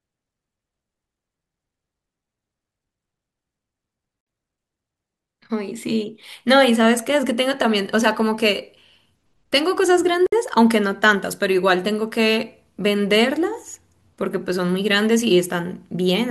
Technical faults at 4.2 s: gap at a join of encoded pieces

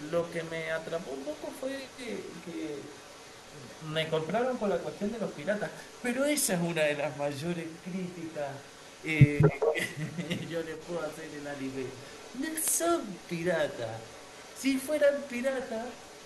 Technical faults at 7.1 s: echo leak

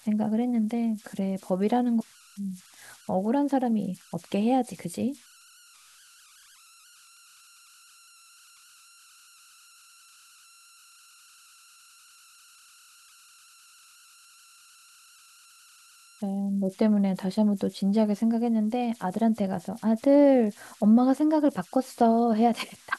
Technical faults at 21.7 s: converter idle tones

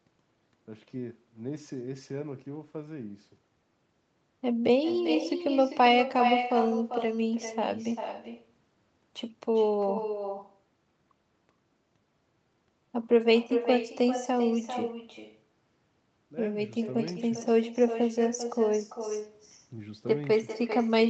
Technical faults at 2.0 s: echo with no canceller

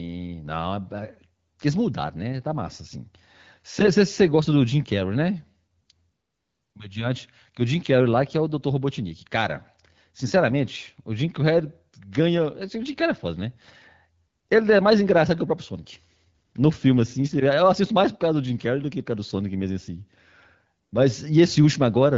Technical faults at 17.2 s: none

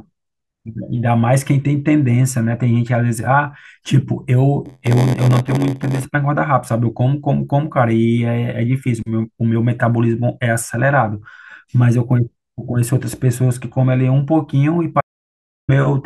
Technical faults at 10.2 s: none

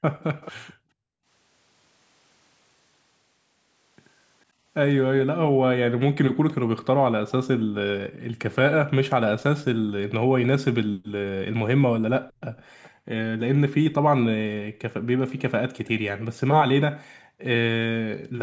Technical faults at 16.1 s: background gated by the echo canceller

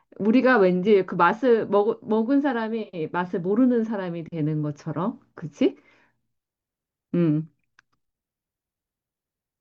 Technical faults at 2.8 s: AAC frame loss with concealment

